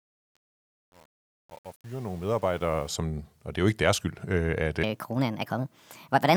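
A fade-in stage that keeps only about 8 bits, with no dither, causes truncation distortion from 0.0 to 2.89 s: the rising speech sounds gritty, worst up to 2.74 s, just before "som og det er".

From 4.83 s to the end, after "deres skyld øh at", the section at the wrong speed plays 1.43 times fast, likely from a clock mismatch, so the speech turns hurried and about seven semitones higher.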